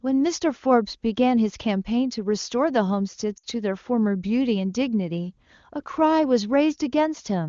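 Speech carried over an AMR wideband (HD Voice) path, with a short dropout from lost AMR speech frames between 3.37 and 3.46 s. Across that gap the decoder has no valid data and conceals it by repeating the last good pitch and vocal tract settings at falling gain. The sound stretches briefly and dies away faster than a narrowband link would. The roughly 60 ms gap points to about three consecutive 20 ms frames. Speech resumes weak or rough for a moment after the gap.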